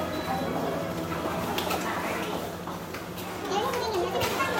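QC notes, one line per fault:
Throughout: wrong sample rate. Everything runs fast and sits noticeably higher, with events hurried along at 1.5 times their natural speed and the whole spectrum lifted by about 7 semitones, close to a perfect fifth. Speed and pitch move together by the same ratio because the samples are played back faster than they were captured, with no rate conversion in between. This fits material recorded at 32 kHz being played at 48 kHz.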